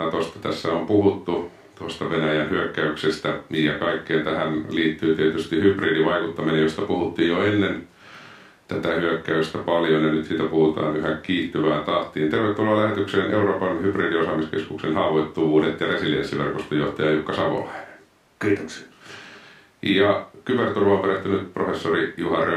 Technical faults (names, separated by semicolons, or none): none